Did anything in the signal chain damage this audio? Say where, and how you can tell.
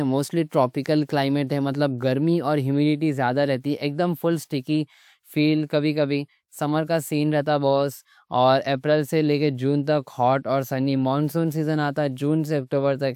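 No, nothing along the way seems to have done any harm here, and the speech comes through as it should with no sign of trouble from any stage.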